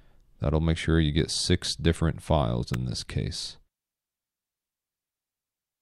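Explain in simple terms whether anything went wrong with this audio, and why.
At 2.74 s there is a single sharp snap, an electrical switching spike, likely from a nearby switch or motor sending a brief arc into the audio line. It sits on top of the sound rather than cutting anything out, which separates it from a dropout.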